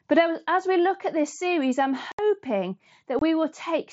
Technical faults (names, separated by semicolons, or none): unconcealed Bluetooth headset packet loss